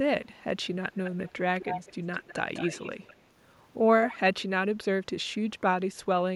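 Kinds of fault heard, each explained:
Echo leak: A delayed copy of the speech trails it by about 0.2 s. It returns in four bursts, from 0.92 to 4.16 s. It is mostly quiet, but louder near 1.6 s. The likely cause is an echo canceller missing part of a loudspeaker's pickup.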